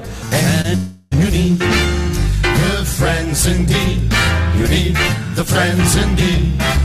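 At 0.61 s to 0.66 s there is a short concealed packet loss. About 20 ms of audio never arrived in time. The receiver bridged the gap by extending the preceding sound, then blended back. It is heard as a brief smear.

From 0.76 s to 1.13 s, the sound turns into a stretched, fading continuation of what came before, with no silence. This is likely a long network dropout. About 360 ms went missing, and the filled-in tail replaced it before real audio resumed.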